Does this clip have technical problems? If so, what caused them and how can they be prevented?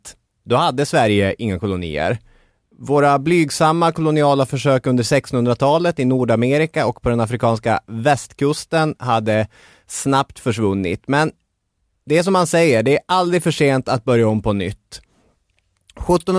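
No, this speech clip has no technical problems to diagnose. With no fault present, there is nothing here that needs preventing.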